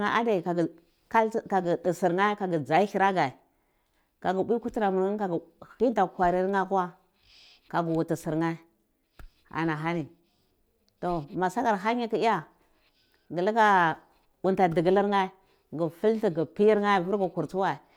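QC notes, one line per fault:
Nothing to flag on this speech clip; I listened all the way through and didn't hear any problems worth a QC line.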